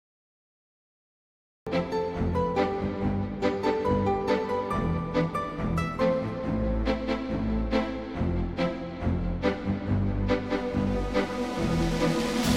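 A cut-off start: capture began late, so the first 1.67 s is digital silence, and the sound then enters abruptly mid-event at 1.67 s with no natural attack.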